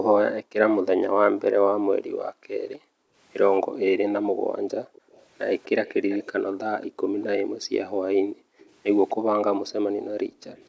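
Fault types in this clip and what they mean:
Background gated by the echo canceller: the echo canceller pulled the microphone down hard while the far side was playing, so the room sound dips by as much as about 40 dB and comes back when it releases. It runs from 0 to 4.93 s, from 5.96 to 8.59 s and from 9.15 to 10.55 s, covering about four, two and one second of those spans. What sets it apart from dropouts or a noise gate is where it falls. Each dip lines up with the far-end audio rather than with the local talker pausing.
Echo leak: a faint delayed copy of the speech comes back, trailing the original by about 247 ms. It sits about 20 dB below the speech from 4.93 to 6.28 s and about 30 dB below from 8.59 to 9.14 s, with a brief trace from 10.56 s to the end. This is likely a loudspeaker-side echo canceller letting part of its microphone pickup through. It differs from room reverberation because it is a discrete, fixed-delay repeat rather than a smooth decay, and the band limit near 8 kHz from the call processing carries through into it.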